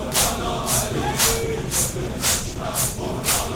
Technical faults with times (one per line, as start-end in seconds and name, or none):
1.44-3.55 call bitrate drop